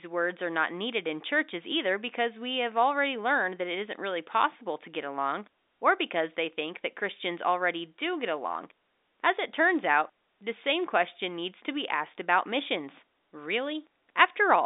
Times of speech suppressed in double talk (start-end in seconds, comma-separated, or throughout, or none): none